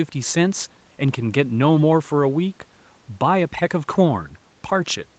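Nothing goes wrong anywhere in this speech clip: it's simply a call-style recording where, after the usual microphone processing and the call path, the audio tops out at around 8 kHz, exactly as you'd expect.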